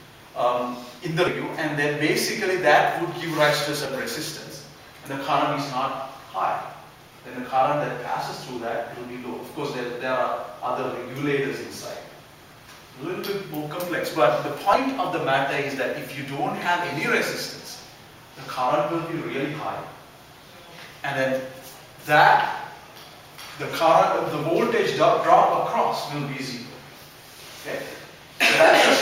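Jumps, where the audio lurches forward, come at 1.27–1.30 s, 3.85 s and 14.73–14.77 s. These are compressed frames skipped: 20 ms frames left out, losing about 150 ms, then roughly 70 ms twice.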